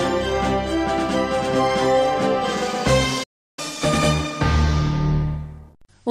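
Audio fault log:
3.23–3.59 s, playback stall: sound halts mid-flow for about 0.34 s, then resumes; likely the player ran dry.
3.59–5.87 s, catch-up at higher speed: sound plays 1.15 times fast, pitch rising about two semitones, as the backlog is resampled; tempo rises with pitch, then both return to normal.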